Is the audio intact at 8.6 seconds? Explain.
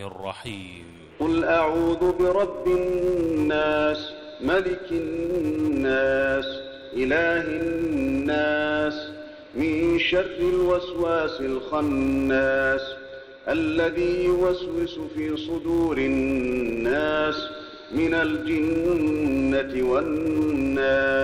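No. At 8.6 seconds, as across the whole clip, a filter restarted on every block is at work: its internal state is thrown away at each block boundary, so every block starts from silence rather than continuing from the last. Each restart leaves a small transient, and with blocks arriving 200 times a second these fuse into a steady 200 Hz buzz riding on the sound, growing louder and softer as the audio's level does.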